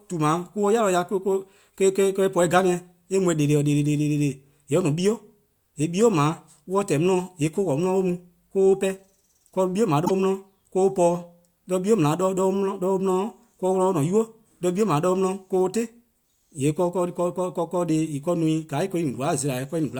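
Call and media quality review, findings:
Damaged data in compressed stream, 10.02–10.11 s: brief glitch in the speech. Decoder misreads corrupted frames and resyncs. Waveform shows a discontinuity.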